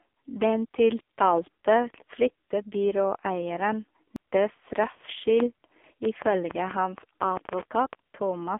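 Throughout, the speech passes through an AMR narrowband mobile codec at heavy damage. The line band runs from roughly 250 Hz to 3.5 kHz, and nothing above 3.6 kHz survives. The buzzy, synthetic texture fits a low mode around 5.9 kbps. Unlike plain band-limiting, the voice itself sounds rebuilt.

At 4.16 s, just after "tiltalte flyttebyråeieren", a CD skip occurs. A tick and a mute of only a few milliseconds mark where playback resumes from a different point. A lone click would not do that; here the speech visibly jumps rather than continuing.

From 5.40 to 7.94 s, a train of clicks rides over the speech. Around fifteen similar pulses arrive at about 5.1 per second, irregularly spaced, and peak some 15 dB above the signal. The likely cause is interference or a struggling interface. Unlike the skip, the sound never loses its place.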